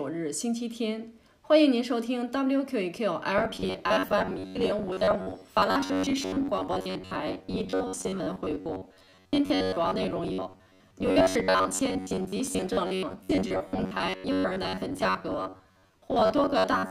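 From about 3.38 s to the end, the audio turns into a rigid metallic buzz around 93.8 Hz: robotic sound from repeated short buffers. It's likely starved playback looping a roughly 10.7 ms chunk, with about half of what you hear being repeats rather than new material.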